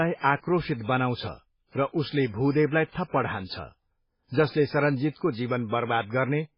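From start to finish the speech sounds dull and watery, with a swirling, metallic edge on s sounds and consonant onsets that blur instead of snapping. Nothing comes through above about 5.3 kHz. This is likely heavy MP3 compression: short of bits, the encoder chopped off the treble at a fixed cut-off and discarded weaker frequency detail that flickers in and out between frames, a level of damage that points to a bitrate around 16 kbps.

At 4.50 to 4.54 s, a brief hiss leads into a sharp attack, and the attack itself lands soft and smeared. This is pre-echo. The coding block containing the onset spread its quantisation noise across its full length, so noise scaled for the loud attack also filled the quiet stretch before it, smearing the hiss about 33 ms ahead of the sound it belongs to.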